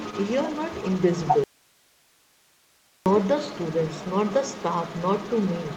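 From the very start to the end of the speech, a second voice runs underneath the main talker at roughly 10 dB below it. This is the other side's voice leaking through, likely because the far end was playing on a loudspeaker and the echo canceller let part of it back into the microphone.

At 1.44 s the speech is suddenly gone, and for 1.62 s, until 3.06 s, only hiss remains, around 35 dB below the normal level, before the signal snaps back. This is an audio dropout to a faint residue, likely the wanted signal being lost while the path after it stayed live. The hard edges at both ends mark it as a break rather than a pause or a fade, and the hiss shows the input was still open through the gap.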